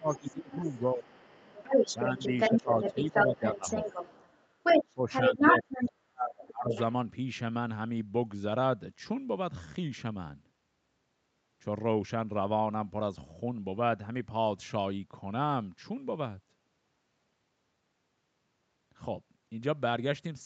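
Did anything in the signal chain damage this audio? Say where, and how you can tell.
Yes. In the call processing stage, the echo canceller's double-talk handling most likely failed, causing speech suppressed in double talk. The talker dips at 0–1.12 s, 1.93–2.19 s, 2.51–3.96 s and 4.85–6.72 s, by anything from a slight sag to nearly vanishing around 5–6.7 s.

The same canceller also let the other side's voice leak through, likely because it left part of the loudspeaker signal in the microphone feed. A second voice runs from 0.14 to 5.88 s, louder than the talker, and returns as a brief, quieter scrap at 6.7–6.81 s.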